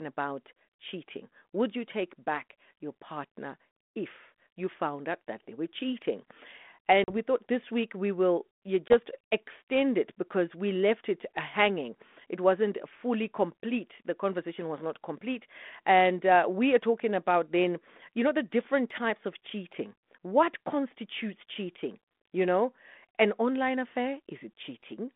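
Speech carried over a G.726 ADPCM telephone path at 32 kbit/s, band-limited to roughly 200 Hz to 3.5 kHz, shows packet loss on an ADPCM call twice. At 7.04 to 7.10 s, just before "we thought this week", about 40 ms drops to hard-edged silence, which points to around two lost packets. At 8.88 to 8.94 s, between "week we will you" and "extend it because we", a 20 ms gap suggests a single packet. After each hole the decoder's adaptive predictor and step size no longer match the sender's, so the speech resumes slightly distorted before resynchronising.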